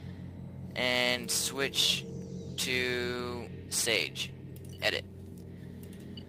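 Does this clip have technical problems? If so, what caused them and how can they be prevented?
No, there are no technical problems to point to in this clip. Nothing in it calls for a cause to be traced or a fix to be applied.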